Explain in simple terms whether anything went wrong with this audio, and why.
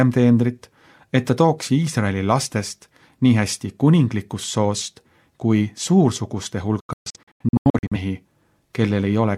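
A digital broadcast dropout hits between 6.80 and 7.96 s. The receiver lost good signal and muted, leaving several short silent holes.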